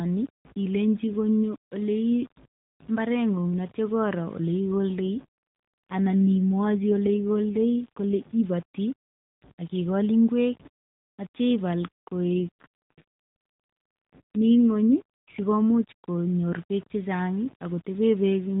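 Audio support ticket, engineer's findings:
Grainy distortion throughout, following the speech. Quiet syllable tails turn gritty and sputter between steps. Error sits roughly 30 dB below the signal. Component: likely a low bit depth stage without dither. Fits rounding to about 6 bits. No dither, so the error tracks the signal instead of forming a steady hiss.

AMR rate drop, 5.00 to 8.41 s. Speech turns rougher, buzzier and more synthetic. Same narrow band, no gap. Component: AMR-NB encoder, the mobile codec otherwise heard lightly coloured at its normal rate. Sound fits a step from 12.2 to 5.9 kbps. Fewer bits per frame mean a coarser vocal-tract model and pulse excitation.

AMR rate drop again, 12.24 to 15.92 s. Same buzzy, synthetic roughness, no dropout and no change in bandwidth. Consistent with a second 12.2 to 5.9 kbps downswitch, then recovery.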